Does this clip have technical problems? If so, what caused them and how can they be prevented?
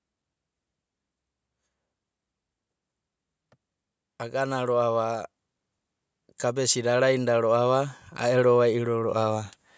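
Yes. From 6.54 to 9.51 s there's automatic gain rising. The gain control judged the speech too quiet and slowly pushed it up by about 7 dB, so voice and room noise swell together. Keep mic distance steady, or set gain manually.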